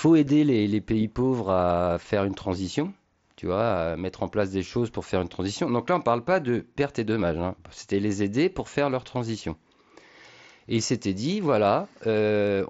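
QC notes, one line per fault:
2.04 s, concealed Bluetooth headset packet loss: a single voice packet between headset and phone went missing, about 7.5 ms of audio, which fits one lost mSBC frame. The receiver filled the gap by repeating the closest-matching stretch of the speech just before it, so the join is nearly seamless: at most a faint blip or slight roughness in the speech, with no buzzy held tone because the loss is isolated.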